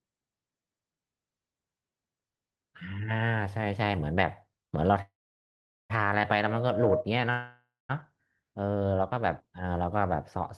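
Speech carried over a call path whose coding noise and a top end stopping near 12 kHz fit a low-bitrate Opus stream. Two call audio freezes occur, likely because packets were held up in transit and the jitter buffer ran dry. From 5.01 to 5.92 s the receiver stretches the last sound into a brief fading buzz, then holds silence for about 0.79 s before the speech resumes where it stopped. The same happens from 7.30 to 7.91 s, with about 0.21 s of silence. Each freeze inserts a gap, about 0.88 s and 0.59 s long, and nothing is lost. A jitter buffer slow-down follows from 8.44 to 8.79 s. To build up a reserve, the receiver repeats single pitch periods several times over, adding 68 ms. The speech there runs at 83% speed with unchanged pitch, sounding drawn out.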